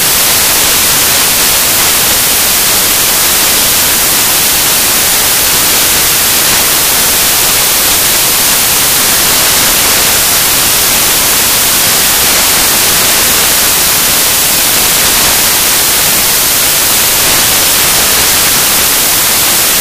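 From the first moment to the end, the whole recording is affected by samples built from the wrong bytes. The reader assembles each sample from misaligned or swapped bytes. The rapidly changing low-order bits end up as the most significant part of every value. The result is loud, harsh broadband noise in place of the real signal.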